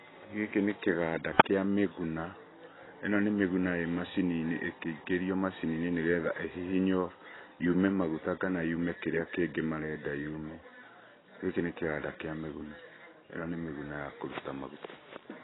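Throughout, the speech sounds dull and muffled, with nothing above 3.9 kHz and a smeared, warbling texture on sibilants. The likely cause is heavy AAC compression: a low-bitrate AAC-LC encode, fitting around 16 kbps, that drops the top band and coarsely quantises what remains.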